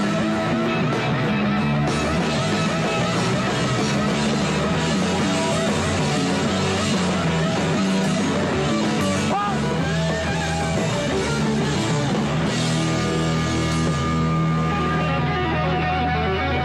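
Nothing in the audio stood out as a technical problem on listening.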